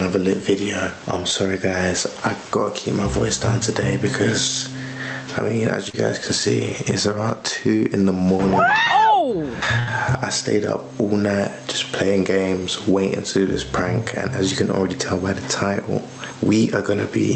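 Gain pumping runs through the whole clip, with a gain swing of around 15 dB. The likely cause is gain set far too high, with a fast limiter clamping it back down. Loud and soft passages sit close in level, and the sound feels squashed.

At 5.89 s there is a short concealed packet loss. About 40 ms of audio never arrived, and the receiver filled the gap by extending the preceding sound before blending back in. It comes across as a brief smear or wobble.

At 9.79 s a burst of packet loss hits. Roughly 80 ms went missing together. The receiver stretched the last sound for about 77 ms and faded it, giving a held buzz or fading hiss. Playback then jumps ahead, and the section in between is gone. The call path's band limit near 8 kHz can be heard as dull top end throughout, which fits an Opus link.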